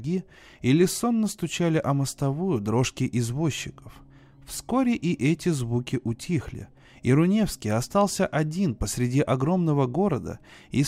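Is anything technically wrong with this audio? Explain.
No, nothing technically wrong is audible here.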